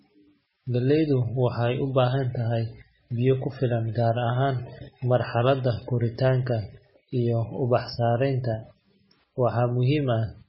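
Throughout the clip, the speech was likely starved of bits by MP3 compression. The damage is heavy enough to point to a rate near 17 kbps. The encoder cut everything above 5.6 kHz and let weak frequency lines flicker between frames, so the speech sounds dull, watery and swirly, with chirpy s sounds and smeared onsets.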